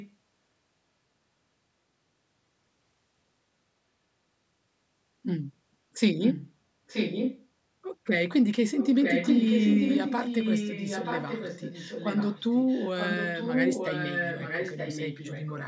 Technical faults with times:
0.00-0.10 echo leak
6.20-6.53 echo leak
6.87-7.47 echo leak
8.79-15.68 echo leak

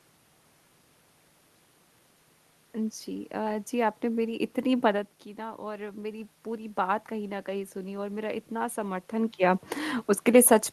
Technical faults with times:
5.36-8.48 automatic gain rising

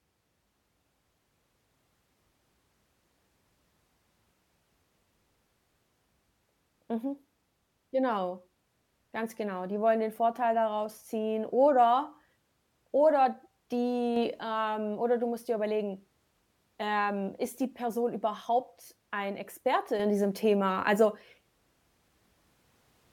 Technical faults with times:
14.16-14.41 sudden gain jump
20.00-23.12 sudden gain jump

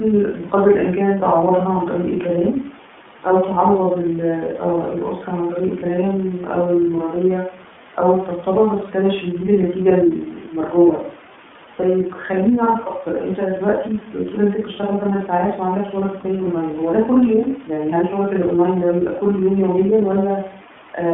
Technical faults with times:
0.00-21.14 iLBC codec

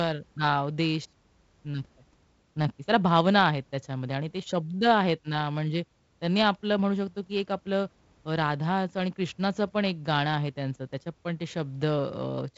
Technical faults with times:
none

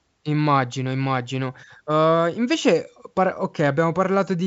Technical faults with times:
none

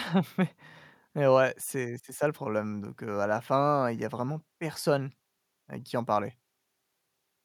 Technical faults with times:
none

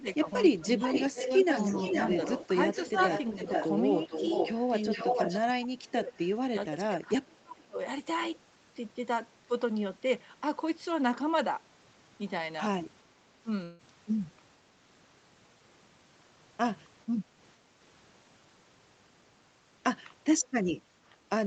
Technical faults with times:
0.00-0.26 speech suppressed in double talk
0.58-0.90 speech suppressed in double talk
0.68-5.39 echo leak
2.91-2.97 speech suppressed in double talk
4.96-6.13 speech suppressed in double talk
5.84-5.88 echo leak
6.51-7.78 speech suppressed in double talk
13.63-13.82 long network dropout

